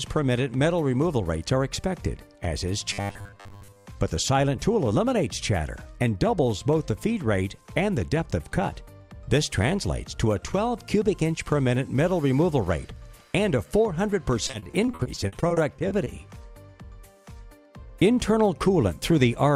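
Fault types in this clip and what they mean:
Robotic sound from repeated short buffers: From 2.93 to 3.86 s the sound becomes a rigid, metallic buzz pinned at 100 Hz. This is likely from fresh audio arriving too slowly, so a 10 ms slice is replayed over and over, covering most of the stretch while the real audio is skipped.
Repeated packet loss (robotic sound): Between 14.47 and 16.08 s, many short gaps follow one another, the longest about 40 ms. Each is patched by stretching the last sound, about 370 ms in all, roughly 23% of the span. About 280 ms of audio is simply missing, giving a choppy, robotic result.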